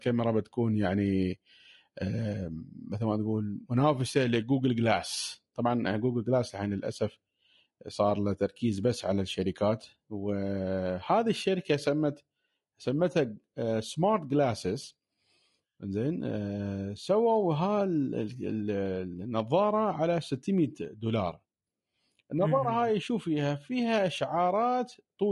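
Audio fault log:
Throughout: low-delay AAC compression. The speech sounds rough and grainy, likely from AAC-ELD at a rate that fits 32 kbps, whose short frames resolve pitch harmonics poorly. A spectrogram shows smeared harmonics with noise filling the gaps between them and a thinned, synthetic-looking top band.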